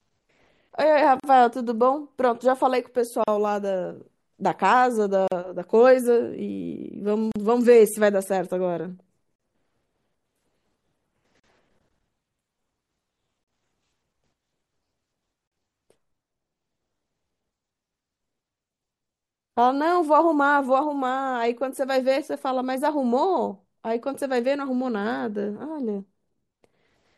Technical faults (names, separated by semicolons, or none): gap at a join of encoded pieces